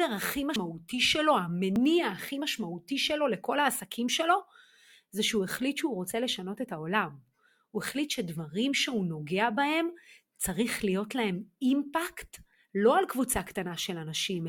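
Dropped buffers (overrun) at 0.56 s and 1.76 s in this speech recording: each is a jump with the sound skipping ahead, likely audio overwritten before capture, losing around a tenth of a second and 40 ms respectively.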